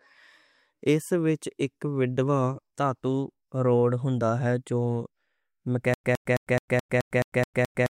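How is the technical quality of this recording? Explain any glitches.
There's one real glitch, and it carries on right to the end. From 5.94 s, the speech falls into a stutter with silent gaps. A 111 ms fragment repeats nine times, each followed by 103 ms of dead silence. That's likely a stalled stream replaying its last chunk, and the real audio is lost.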